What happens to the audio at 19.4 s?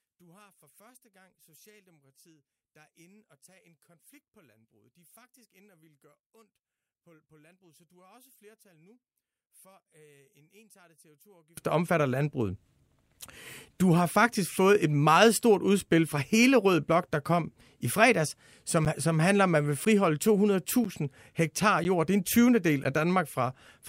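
Regular ticks cut into the speech once a second from 18.85 to 22.85 s. These are periodic USB or driver dropouts: a stalled bus or driver silences about 10 ms each time.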